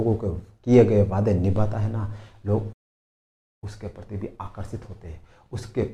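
At 2.72 s the sound cuts out abruptly and stays silent until 3.64 s, a gap of about 0.89 s. That's a playback stall, most likely the player starving for data or its thread getting blocked, before it picks up again.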